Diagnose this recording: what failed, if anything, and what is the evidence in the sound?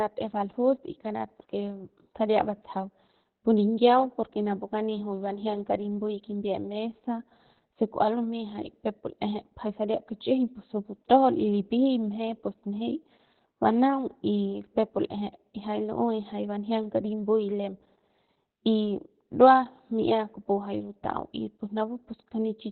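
Codec stage: Opus voice compression throughout, heavy damage. Speech stops near 4.3 kHz and sounds hoarse and slightly robotic, unlike a plain low-pass filter, which pointing to SILK narrowband mode around 8 kbps.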